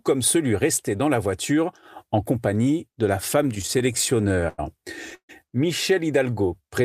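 Right after "en compagnie de la", from 3.43 to 4.60 s, the speech falls into repeated stalls (stutter): 18 short gaps where packets ran late and the jitter buffer emptied, each bridged by extending the last sound, the longest lasting 100 ms. Together they fill 271 ms, about 23% of that stretch, and nothing is lost. Unlike a single freeze, it is a chain of brief hitches that makes the speech drag.

From 5.15 to 5.31 s comes a call audio freeze, likely from packets held up in transit so the buffer ran dry. The last sound is carried on and then gives way to 90 ms of silence, 141 ms in all, before speech resumes where it stopped. Nothing is missing; the added delay of 141 ms marks one long hold rather than a stutter.

From 6.23 s to the end, a jitter buffer slow-down stretches the audio by repeating single pitch periods or pieces of pauses to rebuild a reserve. This adds 84 ms and plays the speech at 87% speed while the pitch stays the same, so sounds are drawn out instead of breaking into gaps.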